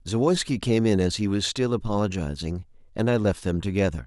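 Nothing stood out as a technical fault on listening to this speech recording.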